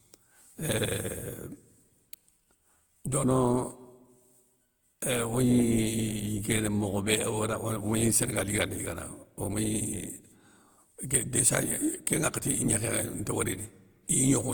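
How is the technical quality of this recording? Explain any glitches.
The speech has a swirly, hollow, smeared quality from start to finish, with consonant onsets blurred rather than crisp, even though content reaches up to about 20.1 kHz. That is more degradation than a single moderate-rate encode would leave. The likely cause is generation loss: the audio appears to have passed through a lossy codec, consistent with Opus at around 48 kbit/s, several times over, perhaps four. Each re-encode quantises on a shifted frame grid, so noise and spectral gaps pile up.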